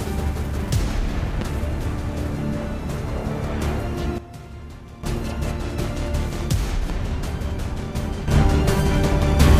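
At 1.41 to 1.44 s a single loud pop cuts through, well above the sound, which carries on beneath it. A likely cause is a voltage spike from a switch or static. At 4.18 s a sudden gain jump drops everything, background noise included, by about 12 dB. The likely cause is a digital gain change applied with no ramp. Level returns at 5.04 s. At 6.90 to 6.93 s another single pop lands, clearly above the sound. A brief electrical transient is the likely source. At 8.28 s a second gain jump lifts sound and noise together by about 10 dB, and they stay there to the end. This is likely another unramped gain step.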